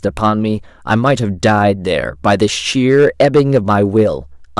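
Throughout the speech, the signal is driven about 6 dB beyond what one stage in the chain can pass, so the loudest peaks are sliced flat. This is hard clipping. Only a small share of the waveform, roughly one sample in fifty, actually hits the ceiling, but each flattened top throws off high harmonics. The result is a brittle crackle and rasp that rides on the louder syllables rather than a constant fuzz.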